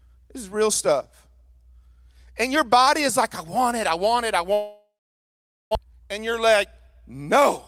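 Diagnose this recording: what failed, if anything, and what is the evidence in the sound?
Long network dropout, 4.53 to 5.77 s: the speech breaks off into a fading buzz, then about 0.83 s of near silence. It resumes with roughly a second of audio gone. This is likely a network-stage loss, with no packets arriving and the receiver concealing the gap.

Jitter buffer speed-up, 5.84 to 7.15 s: right after the gap, the speech sounds hurried, running at 113% speed with the pitch unchanged. Delayed packets arrived together and overfilled the buffer. The receiver trimmed pitch-period slices repeatedly to shed around 200 ms of delay.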